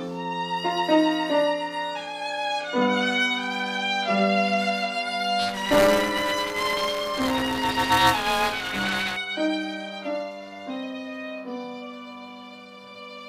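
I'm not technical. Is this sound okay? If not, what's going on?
No. From 5.39 to 9.17 s there is buffer tearing: each 5 ms chunk carries a sliver of audio about 20 ms old, producing a robotic 200 Hz buzz.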